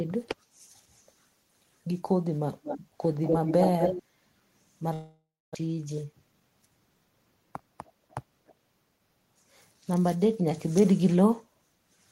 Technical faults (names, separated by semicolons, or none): echo leak; long network dropout